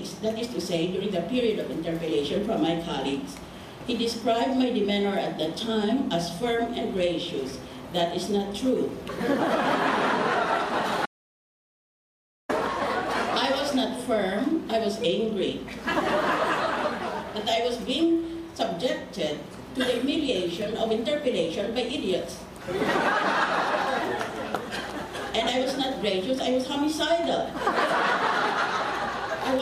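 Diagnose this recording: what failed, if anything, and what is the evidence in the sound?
An audio dropout to silence runs from 11.06 s to 12.49 s. The sound cuts out abruptly and returns mid-flow. The 1.43 s gap is silent, with no room tone. The likely cause is a lost input link, while the recorder kept writing zeros.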